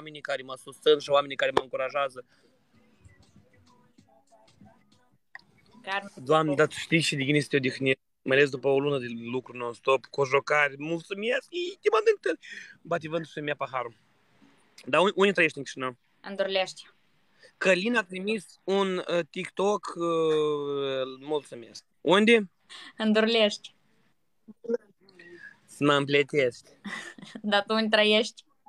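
At 9.12 s the sound suddenly sags: it plays 5.7 percent slow and sits 101 cents flat, about a semitone, then snaps back at 11.02 s. That's likely a drift correction step, with clock-matching software nudging the playback rate to rebalance its buffer.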